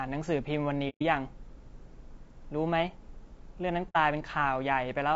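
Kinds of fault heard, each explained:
Low-delay AAC compression, throughout: The speech sounds rough and grainy, with a hiss filling the gaps between the voice's harmonics and a top band that sounds thin and partly synthetic. This is likely AAC-ELD, the low-delay AAC used for video calls, at a low bitrate near 32 kbps. Its very short frames cannot separate closely spaced pitch harmonics well and they use up bits, so the coder smears noise between the harmonics and approximates the highs.
AAC frame loss with muting, at 0.89 to 1.02 s and 3.89 to 3.96 s: The speech drops out briefly, first for about 0.13 s and then for about 0.08 s. Each gap fades out and back in. This fits whole compressed frames going missing, roughly four in the first gap and two in the second. The decoder replaced their spectrum with silence, and the overlapping windows on either side of each gap smoothed its edges into soft ramps.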